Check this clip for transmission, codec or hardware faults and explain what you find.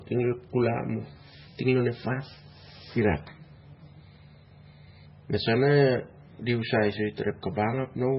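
The speech carries heavy MP3 compression damage for its whole length. Nothing survives above 5.6 kHz, and the remaining band sounds watery and swirly, with smeared consonant attacks. A plain low-pass filter would sound dull but clean. Here, weak frequency lines flicker on and off between frames, likely from an encoder starved of bits, which fits a rate near 16 kbps.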